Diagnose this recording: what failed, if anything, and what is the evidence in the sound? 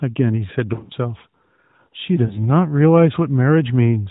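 Lost AMR speech frames, at the network stage over the radio link. From 0.74 to 0.93 s the speech dips and warbles repeatedly. About 100 ms of sound is missing, scattered across 160 ms, and no gap runs longer than 40 ms. A shorter break follows between 2.26 and 2.40 s, about 40 ms in total. Corrupted frames failed their checksum. The AMR-NB decoder at 12.2 kbps then repeated its last good pitch and vocal tract settings at lowered gain, leaving brief smeared patches.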